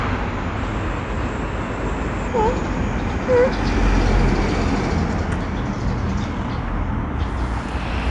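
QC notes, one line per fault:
0.57–2.28 s, wrong sample rate: the sound runs about 1.09 times fast and sits roughly 1.5 semitones high, which fits material recorded at 22 kHz played at 24 kHz. Unlike a pitch shift or time-stretch, speed and pitch rise together, locked.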